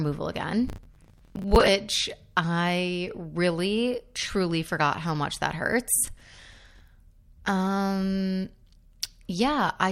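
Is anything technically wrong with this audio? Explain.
Yes, there's processor overload crackle from 0.68 to 1.68 s and again from 5.94 to 6.81 s. The processor keeps missing its deadlines on buffers of roughly 10 ms, so dozens of slots get stale audio with hard edges, which comes out as gritty, tearing crackle over the speech.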